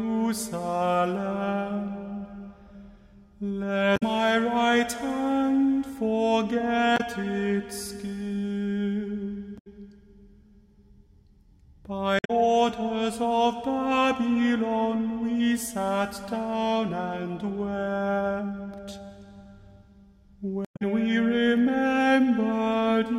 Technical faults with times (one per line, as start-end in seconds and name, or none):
3.93-4.03 damaged data in a compressed stream
6.94-7.00 damaged data in a compressed stream
9.55-9.67 damaged data in a compressed stream
12.16-12.30 damaged data in a compressed stream
20.62-20.82 damaged data in a compressed stream